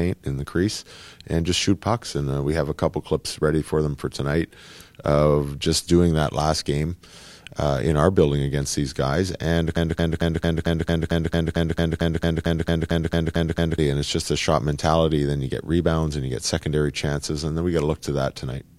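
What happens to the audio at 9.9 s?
The speech is stuck in a broken-record loop from 9.77 to 13.78 s: one 0.22 s fragment repeats identically 18 times, likely a stalled stream resending its last buffer. Unlike a stutter, nothing advances, and the missing audio is lost before "and it's just a".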